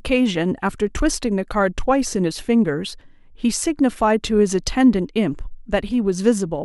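Nothing goes wrong anywhere in this bit of speech, so there's no technical fault to point to.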